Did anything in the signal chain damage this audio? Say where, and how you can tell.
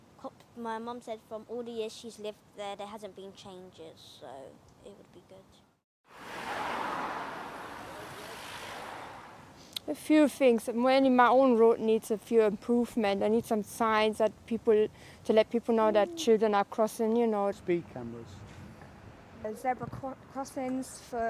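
No, nothing in the signal chain damaged this audio that I can hear.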